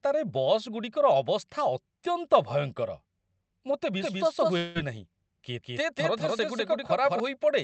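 At 4.02 s a doubled audio track begins. A second, full-band copy of the speech enters abruptly. It trails the original by about a fifth of a second and plays at roughly the same level. It has no decay and no room colour, so it sounds like a hard, clean echo. The likely cause is the same signal being captured twice, once through a slower path. The copy stops abruptly at 7.20 s.

From 4.57 s to 4.78 s there is a long network dropout. Around 180 ms of audio never arrives. For about 175 ms the receiver stretches the last sound into a buzzy tone that fades, with no true silence. The speech then resumes without the lost part. A packet gap on the call's connection is the likely cause. Throughout, the call codec's band limit cuts everything above 8 kHz.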